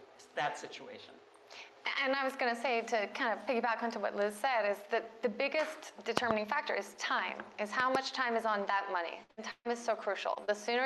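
At 6.17 to 6.33 s a loud pop appears as two sharp pulses in quick succession, peaking about 25 dB above the signal. Another double pop follows at 7.80 to 7.97 s, about 20 dB above. Both are likely voltage steps from a plug, switch, static discharge or driver glitch. The sound carries on underneath each one.

A burst of packet loss spans 9.23 to 9.39 s, about 120 ms of audio missing in two consecutive 60 ms stretches. The receiver extends the last sound and fades it, giving a held buzz or decaying hiss before playback resumes further on. At 9.37 to 9.39 s, a 20 ms lost packet is rebuilt from error correction. The Opus decoder plays the low-bitrate copy carried in the next packet, so there is no gap, but that frame sounds rougher and noisier.

A longer burst at 9.51 to 9.67 s drops about 140 ms. The fill decays into about 40 ms of silence. Its final 20 ms, at 9.65 to 9.67 s, is again rebuilt from error correction with the same coarse texture.

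Short concealed packet loss occurs at 10.35 to 10.42 s and 10.45 to 10.50 s, each losing about 20 ms. The gaps are patched by continuing the preceding sound and blending back. The first stretches timing slightly. Both are heard as brief smears or wobbles.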